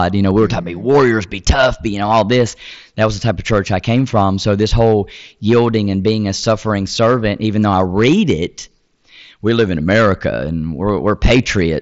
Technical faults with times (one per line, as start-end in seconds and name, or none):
0.00-11.82 hard clipping